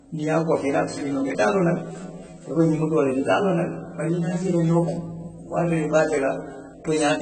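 From start to finish the speech sounds dull and smeared: there's nothing above about 8.3 kHz, the sibilants turn fizzy, and sustained vowels warble as though the detail underneath is being patched in and out. That's the signature of heavy AAC compression, likely AAC-LC at a very low bitrate, something around 16 kbps. At that rate the encoder drops the top of the spectrum and starves the remaining bands, leaving gaps or substitute noise where fine detail should be.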